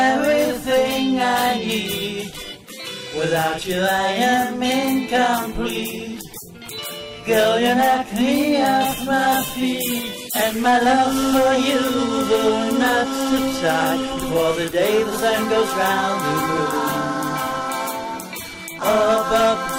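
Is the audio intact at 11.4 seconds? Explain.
No, hard clipping runs throughout, including 11.4 s: about 7 dB of overdrive flattens the peaks, leaving a small share of samples cut off and crackling on the peaks.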